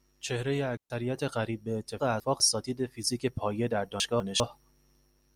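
At 0.77 s a digital wireless dropout cuts the speech for about 130 ms, until 0.90 s. The receiver lost too much data and muted with a very fast fade, leaving a clean hole of near silence with no noise burst on either side.

At 2.0 to 2.4 s and again at 4.0 to 4.4 s, chunks play out of order. In each case a 200 ms chunk arrived one chunk late and plays after its successor. Nothing is missing, but the swapped order jumbles the speech, and there are three hard joins.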